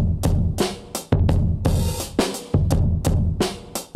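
No technical faults can be heard anywhere in the clip.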